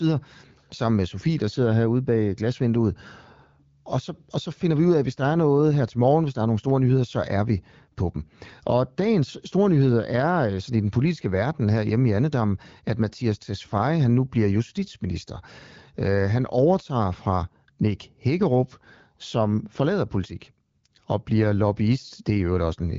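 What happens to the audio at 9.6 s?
Nothing goes wrong at 9.6 s; the speech there is intact, carried through the AMR wideband (HD Voice) codec with nothing above about 7.5 kHz.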